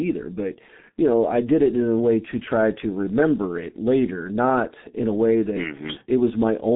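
Muffled, hoarse speech with smeared consonants runs throughout. This is G.723.1 codec damage: narrowband coding, nothing above 3.7 kHz, and a bitrate near 6.3 kbit/s.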